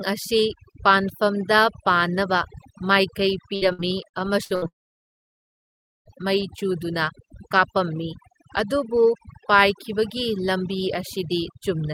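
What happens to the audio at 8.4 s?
Overdone noise removal is present at 8.4 s, as it is across the whole clip. An overly aggressive noise reducer pushes any frequency band near its noise estimate far down, taking quiet parts of the speech with it, so the background drops and breaks up into twinkling specks.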